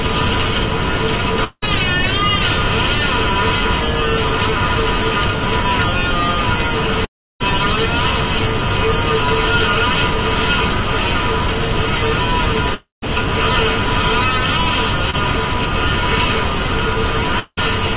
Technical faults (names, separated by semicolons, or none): long network dropout; short concealed packet loss